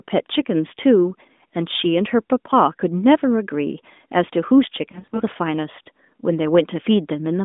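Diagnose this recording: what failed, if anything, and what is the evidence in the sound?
Network stage: lost AMR speech frames from 4.92 to 5.24 s. The decoder patches about 160 ms of gaps with short warbly dips, no run over 40 ms.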